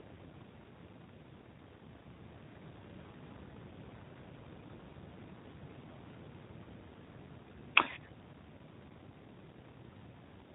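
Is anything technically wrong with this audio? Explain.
Yes. Throughout the speech the audio carries plainly audible G.729 codec damage. The coder rebuilds each 10 ms frame from a vocal tract filter, a pitch predictor and a handful of pulses, a very low data rate that fits 8 kbit/s, and nothing above 4 kHz survives. The result is intelligible but rough and synthetic. That texture is what separates it from a plain narrowband low-pass filter, which dulls the top end but leaves the voice smooth.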